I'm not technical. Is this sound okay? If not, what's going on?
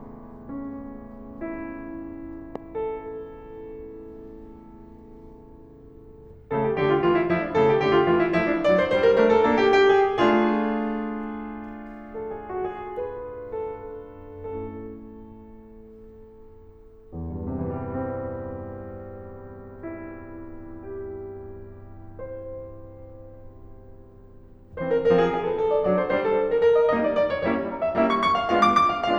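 No. There is a loud pop at about 2.56 to 2.58 seconds: one short, sharp click that jumps out well above the music, while the music keeps playing underneath it. A pop like this is likely caused by a sudden electrical jolt entering the signal, such as a cable being plugged in, a switch being flipped, a static spark or a glitch in the playback hardware. The equipment then turns that jolt into this brief burst of sound.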